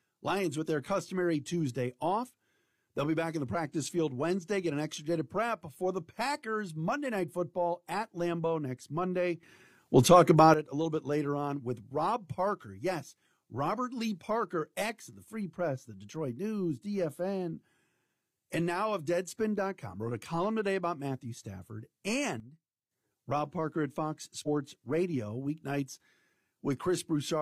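Damaged data in the compressed stream at 2.24 to 2.30 s throws the decoder out of frame sync, producing a brief chirp, squawk, click or short hole, and the same happens at 24.43 to 24.48 s. A sudden gain jump, likely an unramped digital gain change, lifts the speech and background noise together by about 12 dB from 9.43 to 10.54 s. Another, likely from the same cause, drops both by about 12 dB from 22.40 to 22.91 s.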